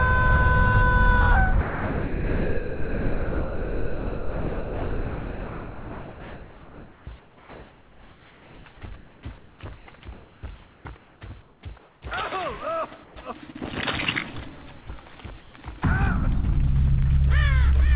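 Audio arrives band-limited at 4 kHz, which fits a narrowband call codec. Sound dropped by the voice detector occurs from 1.61 to 7.07 s and again at 14.81 to 14.87 s. Real sound vanishes under steady noise, likely because the sender's voice detector judged it to be background. Comfort noise replaces the background at 1.61 to 8.66 s, 8.96 to 9.86 s, 10.13 to 12.02 s, 13.04 to 13.16 s and 15.41 to 15.53 s. There, flat synthetic hiss stands in for the real room detail. The last two patches drop the background by about 4 dB and about 3 dB.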